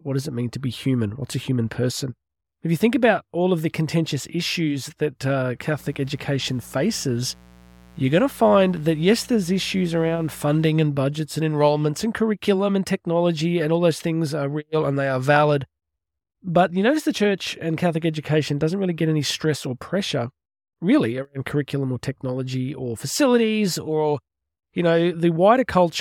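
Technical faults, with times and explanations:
5.73–10.67 s: mains buzz, from "contentious issues that uh" to "and budgets and enrollments". Sharp spikes twice per 60 Hz cycle give a raspy buzz, roughly 25 dB under speech.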